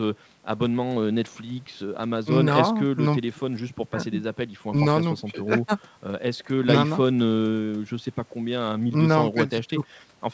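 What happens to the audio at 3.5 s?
Nothing goes wrong at 3.5 s: the speech there comes through intact, with only the ordinary call-path band limit that leaves nothing above about 8 kHz.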